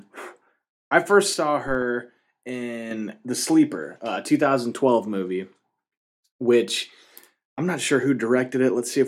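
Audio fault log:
1.34–2.91 s, sudden gain jump: Right after "I first", the speech and background noise drop together by about 6 dB with no ramp. The change lands between two samples. A level setting applied without smoothing is the likely cause. It holds until 2.91 s, then the level returns.
1.68–1.83 s, corrupt FLAC frame: Damaged bits in the compressed stream throw off the decoder's prediction. Two frames decode wrong, giving errors that peak at about -21 dBFS. The next intact frame is clean.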